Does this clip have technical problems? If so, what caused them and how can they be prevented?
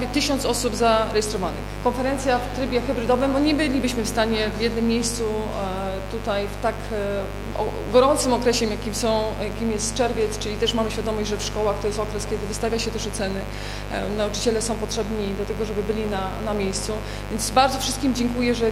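Yes: a steady, raspy mains buzz runs through the whole clip, fairly loud relative to the sound. Sharp spikes entering twice per 50 Hz cycle fill a spectrogram with evenly spaced horizontal lines at 50 Hz multiples reaching several kHz. Shielded cabling and keeping dimmers and rectifiers away from the audio path prevent it.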